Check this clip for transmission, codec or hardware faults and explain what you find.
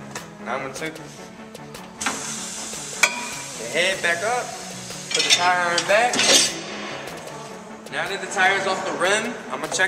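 The signal holds steady throughout, with no transmission, codec or hardware faults to be heard.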